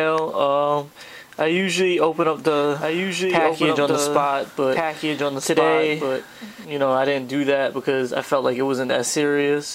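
From 2.47 s to 6.65 s, a doubled audio track appears. A second copy of the sound runs about one and a half seconds behind, a few dB quieter. It has no decay or room colour. It starts and stops abruptly. A slower second capture path is the likely cause.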